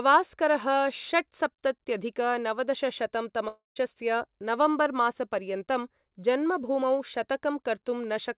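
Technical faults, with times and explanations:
3.48–3.78 s, long network dropout: the speech breaks into a buzzy, fading copy of its last sound, sinks to near-silence for about 0.14 s, then resumes with about 0.28 s of audio missing. The likely cause is a burst of lost packets that the receiver covered by repeating and decaying the final waveform. A spectrogram shows smeared, repeating bands under the 4 kHz ceiling of the call path fading to a dark gap. The waveform shows a shrinking periodic envelope, then a flat line.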